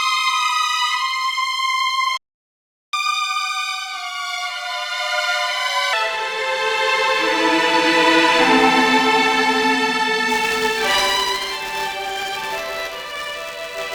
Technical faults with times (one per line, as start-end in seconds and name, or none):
2.17-2.93 playback stall
2.93-5.93 catch-up at higher speed
10.29-13.94 buffer tearing